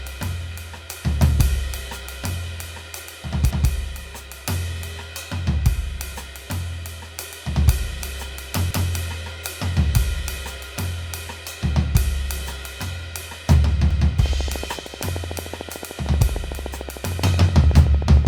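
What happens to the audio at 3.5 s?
At 3.51 s the music hits an overlapping-chunks fault. The next processing chunk, about 5 s long, begins 200 ms before the previous one finished, so the section from 3.51 to 3.71 s plays twice, heard as a brief stutter or click at the join. On a waveform the same 200 ms shape appears twice in a row, with a discontinuity where they meet. A spectrogram shows a thin vertical broadband line there, followed by a repeated pattern.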